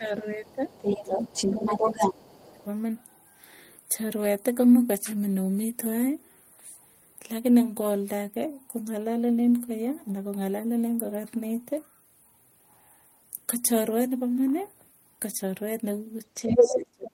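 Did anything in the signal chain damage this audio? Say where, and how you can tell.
Yes, in call processing. Speech suppressed in double talk drops the talker by about 10 dB at 0.0–0.71 s and 0.88–1.24 s, about 25 dB at 1.5–2.65 s, and about 35 dB from 16.44 s to the end. The waveform envelope caves in at each point. The likely cause is an echo canceller muting overlap it read as echo.

The other side's voice leaking through sits at roughly the talker's level from 0.46 to 2.12 s, is barely audible at 2.4–2.63 s, and is about 10 dB louder at 16.49–16.78 s. A spectrogram shows a second, unrelated harmonic pattern. This is likely loudspeaker pickup the canceller missed.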